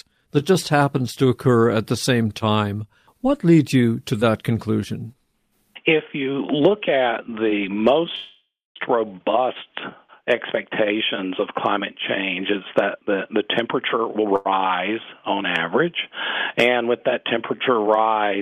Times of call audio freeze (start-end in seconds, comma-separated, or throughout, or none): 8.15-8.77